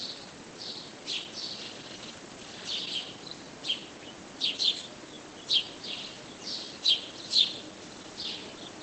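Clock drift between sender and receiver runs through the whole clip: the sender's clock is roughly 5% slow, so the jitter buffer keeps draining and the receiver has to pad the sound out.

Repeated timing corrections follow from that, from 0.18 to 8.52 s. Short pieces get repeated, stretching playback to about 96% speed and adding roughly 400 ms overall, which gives a faintly uneven tempo.

Scattered short gaps show up in two patches. From 0.24 to 2.88 s there are about four tiny holes of 15 ms or less, each patched by carrying the last sound forward. From 6.05 to 8.25 s there are about five more of around 10 ms or less. Both patches come across as brief ticks or little smears.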